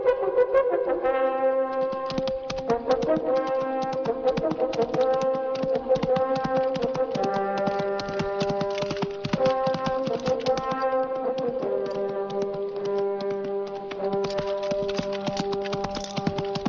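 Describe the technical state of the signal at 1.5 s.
No fault is audible at 1.5 s, and the signal is intact at that point.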